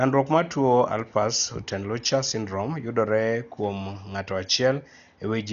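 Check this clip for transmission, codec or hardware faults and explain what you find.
One codec fault runs through the whole clip. Throughout, the speech is dull, with nothing above 7 kHz and rough, fluttering noise around tones, likely from heavy Dolby Digital compression at a bitrate near 48 kbps. The encoder narrowed the band and left many frequency lines without mantissa bits, so the decoder filled them with dither noise. That noise fill separates it from a plain low-pass filter, which would sound dull but clean.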